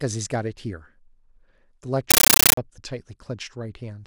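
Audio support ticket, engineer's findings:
Compressed stream played as audio, 2.11–2.57 s: AC-3 bitstream on digital link passed as PCM, not decoded. Speech replaced by very loud chattering static, 13.3 ms noise bursts plus silent padding at 31.25 Hz. Fits a 640 kbps frame.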